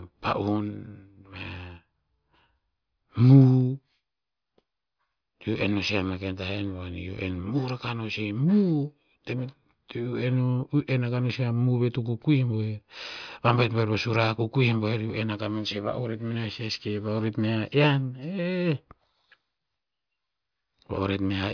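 Listening to this speech recording, nothing technically out of the ordinary stood out at any point.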